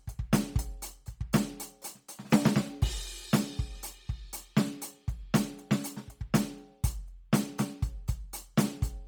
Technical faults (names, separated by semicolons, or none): Bluetooth LC3 compression